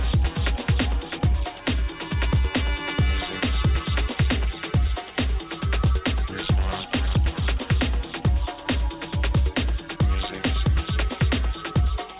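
Nothing technical goes wrong anywhere in this audio; there's nothing here to flag.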